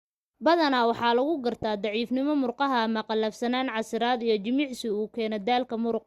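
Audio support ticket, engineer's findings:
DAB burbling at 1.62 s, between "waxaa lagu" and "daciifnimo murqaha ama qallafsanaan". Brief noise blips over the speech. Probable component: DAB receiver audio decoder. Weak reception let bit errors slip past error correction into the MP2 data. Corrupted samples put short noise blips into single sub-bands. Error rate around a tenth of a percent.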